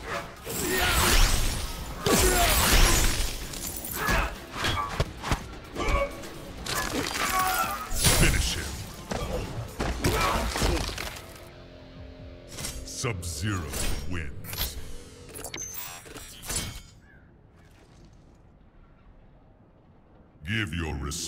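Listening closely turned up nothing that stood out as a technical fault at any point in the audio.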